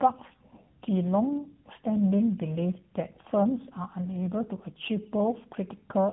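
Tandem speech coding runs through the whole of this speech clip. The audio was decoded and re-encoded by two low-rate speech codecs in a row, which fits a GSM full-rate leg followed by AMR-NB. The second coder compounds the first's errors, leaving roughness, warble, and nothing above 3.9 kHz.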